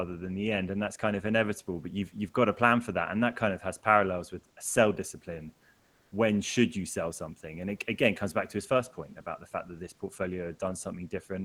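From 5.79 to 6.11 s the background turns flat and featureless, shifting about 1 dB: comfort noise in place of the background, likely from Opus DTX pausing transmission.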